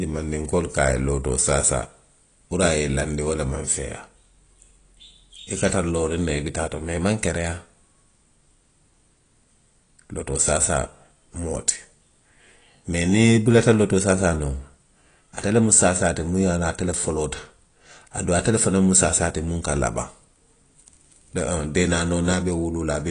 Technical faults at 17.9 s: AAC compression

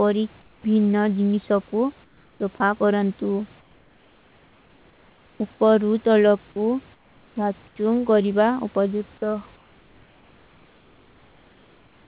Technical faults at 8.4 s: none

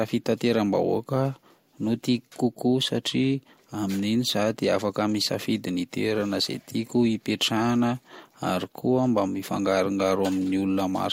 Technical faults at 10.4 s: none

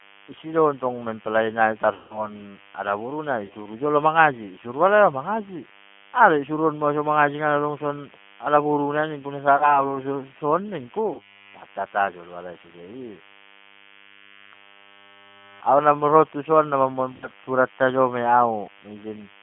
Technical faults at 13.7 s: DECT cordless phone buzz; G.729 codec

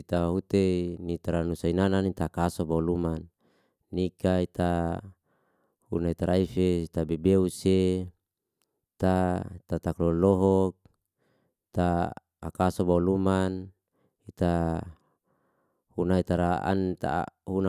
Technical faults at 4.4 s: none

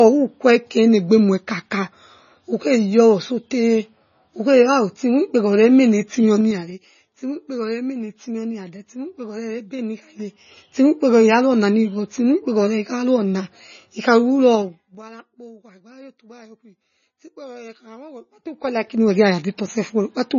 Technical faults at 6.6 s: MP3 compression; zipper noise

